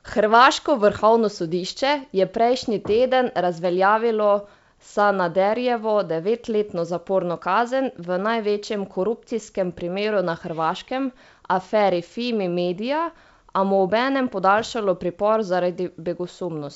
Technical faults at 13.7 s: none

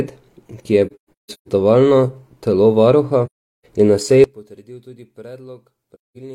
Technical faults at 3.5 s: AAC frame loss with muting

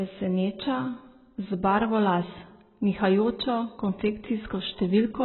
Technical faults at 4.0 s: AAC compression

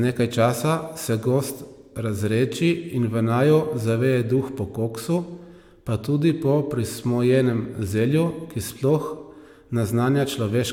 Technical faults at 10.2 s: none

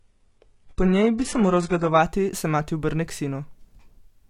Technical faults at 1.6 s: adaptive stream starting at a low bitrate

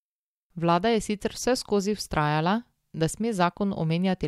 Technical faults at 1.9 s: none

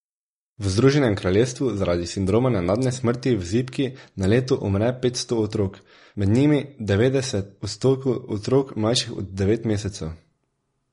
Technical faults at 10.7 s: MP3 compression

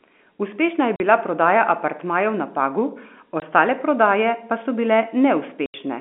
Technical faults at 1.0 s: packet loss filled with silence

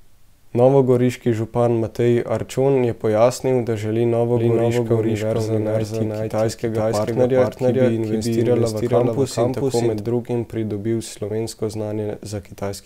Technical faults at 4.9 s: doubled audio track

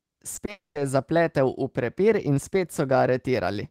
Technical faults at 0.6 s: long network dropout

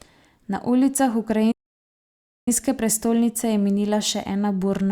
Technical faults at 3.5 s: none

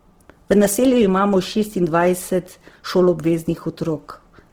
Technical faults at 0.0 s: Opus compression

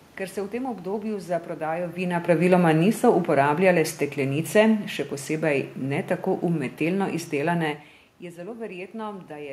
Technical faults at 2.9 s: automatic gain falling

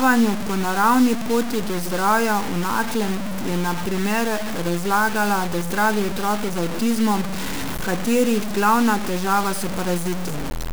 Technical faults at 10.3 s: low bit depth without dither

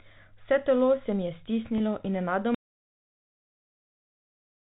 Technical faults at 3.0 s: audio dropout to silence

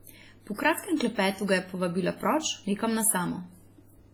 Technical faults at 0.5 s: WMA compression; pre-echo

